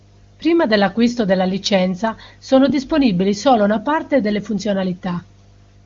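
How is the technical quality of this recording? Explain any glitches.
The speech carries one steady fault, a mains hum, riding under the band-limited sound of a wideband phone codec that cuts everything above about 7.2 kHz.

Mains hum runs throughout: a constant 50 Hz tone, roughly 30 dB below the speech, leaking in from the power line through a ground loop or nearby transformer. It sounds like a faint low drone, and a spectrogram shows a thin unbroken horizontal line at 50 Hz, persisting through pauses.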